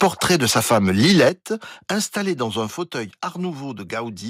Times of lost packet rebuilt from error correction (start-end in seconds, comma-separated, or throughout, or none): none